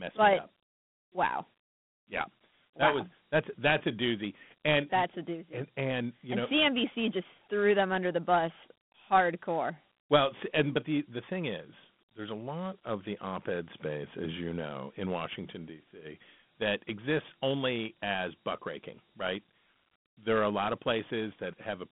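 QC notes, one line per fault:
Throughout, Dialogic VOX ADPCM: the speech sits in a phone-line band from about 150 Hz to 3.5 kHz, with nothing above 3.9 kHz, which fits 4-bit ADPCM at 8,000 samples a second (32 kbps). The coarse 4-bit steps leave a gritty hiss that clearly rides along with the speech.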